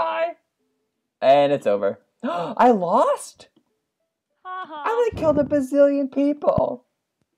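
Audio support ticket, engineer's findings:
Loud pop, 5.37–5.39 s and 6.58–6.60 s: two sharp pops riding over the sound, which continues underneath, peaking roughly 10 dB above it. Likely a voltage transient from a connector, switch or static discharge. Waveform shows isolated spikes; spectrogram shows thin full-band vertical stripes.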